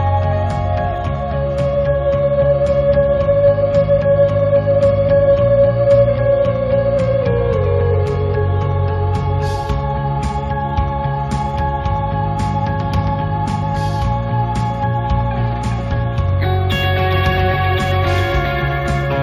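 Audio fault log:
Throughout: imaging from linear upsampling, 16 kHz raised to 48 kHz by straight-line interpolation, dulling the top band and leaving faint mirror images from 8 to 16 kHz, about 40 dB down, heard as metallic shimmer.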